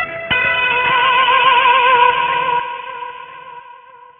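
Everyday sound here, with aliasing running the whole way through. Everything tops out hard at 3 kHz, and the higher content has folded back below it as gritty, metallic tones that aren't far under the real signal. That points to a drop to about a 6 kHz sample rate with no anti-alias filter first.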